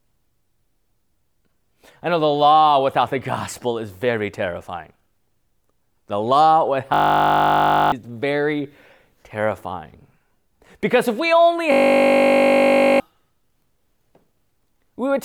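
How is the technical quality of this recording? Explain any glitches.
Two glitches of the same kind interrupt the recording.

System hang loop, 6.94 to 7.92 s and 11.72 to 13.0 s (the second right after "if we only"). The system froze while the audio hardware kept replaying one 20 ms slice of its buffer, so each event is a steady 50 Hz buzz. About a second, then about one and a half seconds, of speech is lost.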